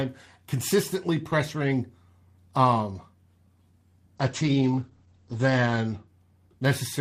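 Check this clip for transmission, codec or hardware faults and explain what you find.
One transmission fault is audible: a call bitrate drop between 4.2 and 6.13 s in this speech clip. The bandwidth estimate fell and the encoder was made to code with far fewer bits, consistent with a fall from roughly 32 kbps to 11 kbps. The audio bandwidth narrows from 20 kHz to 8 kHz, so the voice turns muffled and coarsely textured, staying at its worst for about 1.63 s before recovering.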